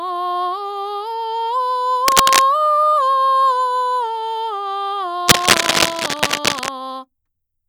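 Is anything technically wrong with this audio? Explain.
Yes. The music is interrupted twice by cable scratch noise, from 2.07 to 2.41 s and again, for longer, from 5.28 to 6.69 s. The likely cause is a worn cable, plug or control being moved, so its contact resistance jumps erratically and injects ragged, uneven bursts of noise into the signal. Here those bursts sit at roughly the same level as the music, so each passage is heard as a prominent scratching, rustling layer over the sound.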